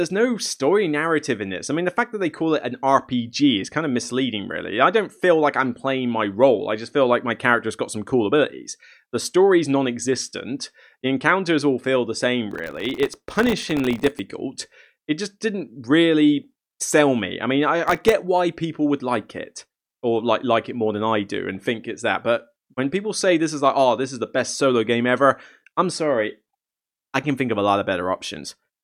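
From 12.51 to 14.19 s, and again from 17.88 to 18.12 s, the speech is torn by processor overload crackle: buffers of well under a millisecond keep missing their deadline, each miss leaving a tiny silent gap. Unlike a single dropout, these dense gaps form gritty crackle riding the sound.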